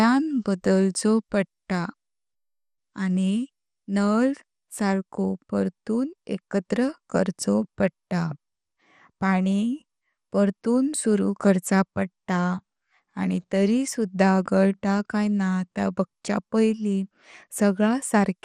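Throughout the speech, nothing reaches above 14.3 kHz, and a gurgling, granular roughness is plainly audible. This is likely MP2 compression starved of bits, consistent with roughly 64 kbps.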